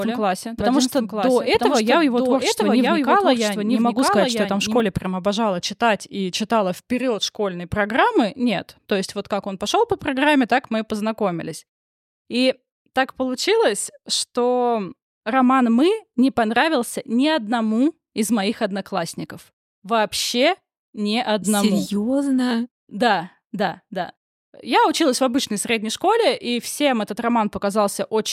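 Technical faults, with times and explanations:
0 to 4.8 s, doubled audio track: A dry, full-band copy of the speech trails about a second behind, roughly 5 dB quieter. It is under way as the clip opens and stops abruptly before "прям обожала читать и". A slower second capture path is the likely cause.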